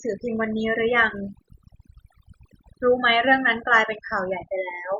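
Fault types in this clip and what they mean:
overdone noise removal: noise reduction set too aggressively cuts bands near the noise floor, leaving near-silent gaps with twinkling specks throughout.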